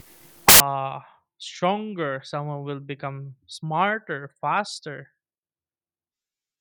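Right from the start, 0 to 0.6 s, you get samples built from the wrong bytes: the bytes in each sample are being assembled out of order or misaligned, so the jittery low bits land in the high end of the value. It comes out as loud, harsh broadband noise.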